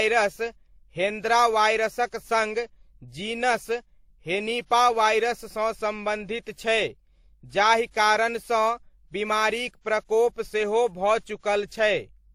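Throughout the speech, Opus-style smearing sits under WMA-style swirl, with nothing above 19.9 kHz. This is likely transcoding between lossy codecs, Opus re-encoded to WMA.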